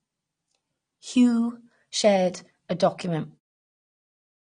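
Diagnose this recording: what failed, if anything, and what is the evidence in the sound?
AAC compression damage runs through the whole speech clip, pointing to the codec stage. Nothing reaches above 9.6 kHz, so the top end sounds dull, and the codec damage is plainly audible as smeared, warbling texture on sibilants and sustained sounds, continuing into the fade-out at the end. The cause is likely an AAC-LC encode at a low bitrate, which fits about 32 kbps: the encoder lowered its cut-off and quantised the remaining bands coarsely.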